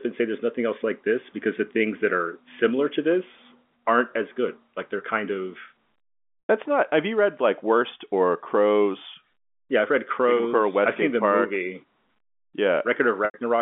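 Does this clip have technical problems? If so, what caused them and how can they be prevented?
Yes. Packet loss with pitch repetition occurs at 6.47 s and 13.25 to 13.34 s, dropping about 100 ms and 90 ms, which fits runs of roughly ten 10 ms packets. The receiver looped the last pitch cycle, decayed it to silence within about 50 ms, then cross-faded back into the G.711 telephone-band speech. Prevent it with a larger jitter buffer, forward error correction, or QoS priority for voice traffic.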